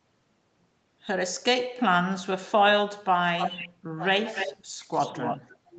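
A far-end echo canceller most likely failed to remove its loudspeaker signal, so an echo leak returns the sound about 285 ms late from 3.38 to 3.68 s, again from 4.18 to 4.52 s, and from 4.97 to 5.57 s. The first two leaks sit only about 5 dB below the direct speech. The third is weaker at about 10 dB down but lasts longer. Each comes through as a delayed trailing copy.

Where both sides overlapped, the same canceller likely mistook the near talker for echo and pulled the level down. This speech suppressed in double talk appears first as a brief dip of about 20 dB near 3.95 to 4.02 s. From 4.29 to 4.92 s the suppression is longer and deeper at about 25 dB, overlapping the second echo leak. From 5.61 s to the end it returns at about 25 dB. The speech there sounds ducked, within the call path's band limit of 8 kHz.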